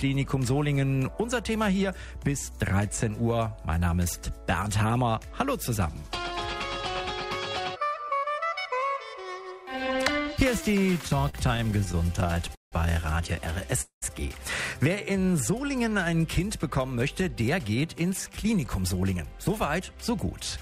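From 10.71 to 12.74 s the sound drags and catches repeatedly: repeated stalls (stutter), more than twenty brief hitches, the longest 170 ms. Packets kept arriving late, so the jitter buffer kept emptying and the receiver stretched the last sound, filling 425 ms, about a fifth of the stretch.

At 13.81 s the sound hangs as a fading continuation of itself, then drops to silence for 120 ms before resuming at 14.04 s, with nothing skipped. This is a call audio freeze: packets were likely held up in transit, emptying the buffer and inserting a 207 ms gap.

Between 15.04 and 16.12 s the sound slows to 92% of its pace with unchanged pitch, with drawn-out sounds. In this jitter buffer slow-down, the receiver rebuilt its reserve by repeating single pitch periods and bits of pauses, adding 92 ms.

From 17.81 to 19.40 s the sound hurries at 110% speed without rising in pitch, and again from 19.81 to 20.58 s at 106%. 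Both are a jitter buffer speed-up. The buffer held too much audio, so the receiver trimmed short pitch-period pieces, about a fifth of a second in the first stretch and around 50 ms in the second.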